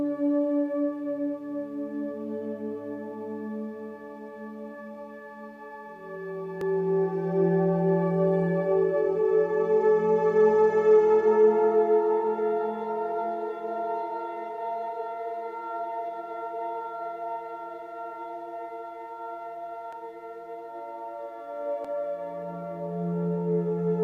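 At 6.61, 19.93 and 21.85 s the audio jumps ahead with no silent gap, unlike a dropout. This is likely a dropped buffer (overrun), and the last skip is the longest.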